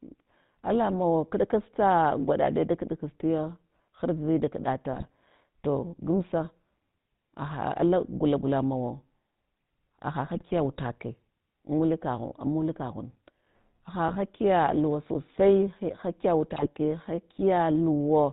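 A buzzy, gravelly roughness runs through the whole recording, with nothing above 4 kHz. This is the GSM full-rate codec, which fits a 13 kbps stream. It rebuilds the voice from a vocal-tract model driven by sparse, regularly spaced pulses.

Brief squawks, pops and gargling break through at 4.93 to 5.14 s, 10.35 to 10.43 s, 14.08 to 14.17 s and 16.56 to 16.69 s. These are GSM bit errors. Corrupted filter, pitch or gain values reach the decoder, warping the spectrum or spiking the level frame by frame.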